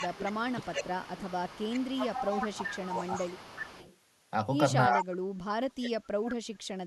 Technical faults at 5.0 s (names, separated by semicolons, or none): speech suppressed in double talk; echo leak